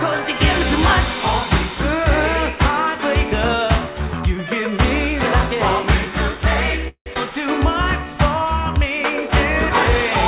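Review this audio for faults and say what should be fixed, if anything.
At 6.88 to 7.08 s there is a call audio freeze: packets were likely held up in transit, so the jitter buffer ran dry and the receiver extended the last sound for about 0.18 s, fading into 80 ms of silence before playback resumed with nothing lost. A larger or more adaptive jitter buffer target on this link, or steadier network routing, would absorb that delay.

Right after, at 7.14 to 7.17 s, comes a skip ahead. Roughly a tenth of a second of audio was discarded while later packets were already queued, and the two sides were joined with only a 16 ms bridge, so playback jumps forward. Letting the buffer drain the backlog gradually, rather than dropping audio after the stall, would avoid it.

From 8.04 to 8.80 s a jitter buffer slow-down occurs. The buffer was rebuilding its reserve by repeating short pitch periods, adding 60 ms and running the audio at 93% speed at unchanged pitch, which draws sounds out. 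Smoother target-delay changes would keep this stretching from being heard.

Throughout, nothing reaches above 4 kHz, consistent with a narrowband G.711-style call codec.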